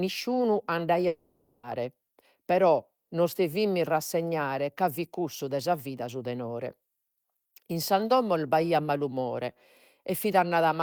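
From 1.07 to 1.66 s, the speech likely suffers a long network dropout: the incoming audio stopped, and the receiver papered over the hole by extending the last sound it had. About 560 ms of the original speech is lost and replaced by that synthetic continuation, with no stretch of silence. It sounds like a stretched, buzzy or hissy smear where the speech should be, after which the talker resumes further on with that part simply missing.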